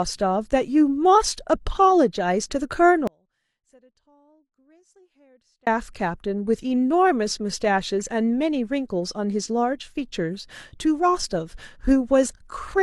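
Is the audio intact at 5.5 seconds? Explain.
No. The speech signal was likely lost upstream while the path after the break stayed live, producing an audio dropout to a faint residue from 3.07 to 5.67 s. For those 2.6 s, speech cuts abruptly to a faint residue roughly 35 dB below normal.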